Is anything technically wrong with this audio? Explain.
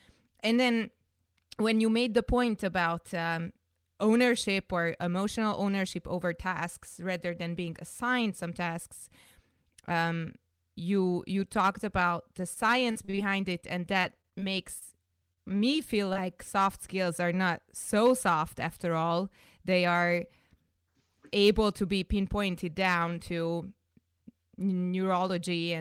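Yes. The speech has two kinds of packet-loss fault between about 12.4 and 16.2 seconds.

Repeated packet loss (robotic sound) occurs at 12.41–13.65 s, just after "you you talked about", then at 14.01–14.43 s and 14.79–15.61 s. In each stretch, holes of up to 41 ms follow one another closely. Each is patched by extending the preceding sound, so roughly 15 to 19 percent of each stretch is synthetic. The result is choppy and robotic, with fragments missing.

Short concealed packet loss occurs at 16.13–16.17 s. About 20 ms of audio failed to arrive and was filled by continuing the previous sound before blending back into the real signal. It is heard as a brief smear or wobble, and a short consonant may drop out.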